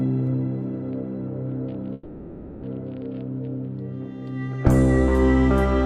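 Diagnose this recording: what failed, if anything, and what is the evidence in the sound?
A call audio freeze sits in the network stage, from 1.93 to 2.64 s. The last sound is stretched into a fading buzz lasting 0.69 s, and the audio then resumes where it stopped, now 0.69 s late. This is likely a jitter buffer running dry while packets were held up. A spectrogram shows the final frame's spectrum smeared horizontally and decaying, with no clean silence.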